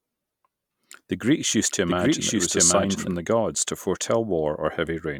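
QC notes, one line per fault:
1.68–3.14 s, doubled audio track: The speech is heard twice at once. A second full-band copy runs roughly 0.7 s behind the original, at about the same loudness. It carries no decay or added room colour, so it reads as a clean duplicate rather than an echo. The copy cuts in and out abruptly at the ends of the span. This likely comes from a second, slower capture path or an edit that left two copies out of step.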